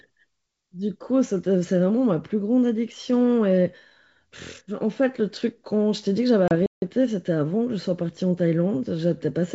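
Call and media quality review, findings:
Hard-edged gap in the speech at 6.48–6.52 s, about 30 ms. Return slightly distorted before settling. Packet loss on an ADPCM call: a few packets dropped, decoder predictor and step size desynchronised.

Speech cuts out mid-flow at 6.66–6.82 s, about 160 ms of silence, then resumes. Playback stall, likely the player's buffer running dry or its thread blocked.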